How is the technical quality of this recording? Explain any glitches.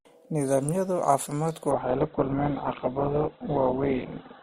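The recording has one clear problem: an adaptive stream at a lower bitrate from 1.71 s to the end. The speech suddenly loses its treble and takes on a thin codec character, with no gap at the switch. The player likely dropped to a lower-bitrate version of the stream when the connection slowed, and the sound fits a fall from roughly 64 kbit/s Opus to about 8 kbit/s. On a spectrogram, everything above 4.3 kHz vanishes abruptly at 1.71 s. The waveform stays continuous.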